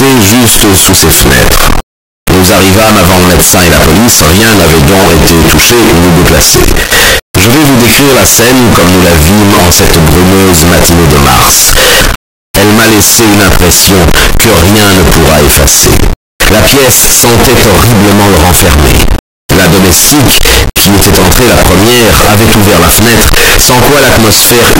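Float read as integer runs through the entire speech clip, start to finish. The signal sits at an almost fixed, high level as a near-square wave, very loud and harsh, with background noise as loud as the talker. The likely cause is 32-bit floating-point samples being read as 32-bit integers, so each value is set by its sign and exponent bits rather than its true amplitude. Pitch still tracks the speech underneath.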